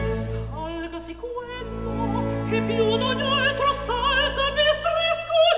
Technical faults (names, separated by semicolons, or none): none